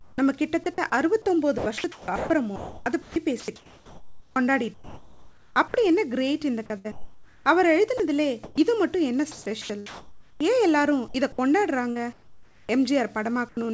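From 0.0 to 0.66 s the background is replaced by comfort noise: about 0.2 s of the room tone becomes a smooth, featureless hiss with none of the texture of the real ambience. The likely cause is discontinuous transmission, with the sender pausing during a gap and the receiver synthesising a rough stand-in. This is not a dropout in itself, because only the character of the background changes.

At 0.64 to 0.66 s, sound is dropped by the voice detector. A quiet fragment, about 10 ms of actual sound, gives way to steady noise. It is likely that the detector took faint speech for background. Unlike chopping, this is a single clean switch off and back on, heard as one tiny gap at the edge of the opening stretch. The same thing happens once more at 13.49 to 13.57 s, where about 30 ms of sound is lost. It is a single, isolated cut near the end and not a run of them.

From 1.58 to 5.74 s and again from 6.78 to 12.69 s, the sound is chopped by the voice detector. 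The detector likely toggled between sending and not sending more than once. Altogether about 2.6 s and 2.2 s of those stretches are replaced by comfort noise. Each stretch has two or more holes in the sound. These repeated switches are what set chopping apart from a single drop. Throughout, the G.722 call path leaves nothing above 8 kHz.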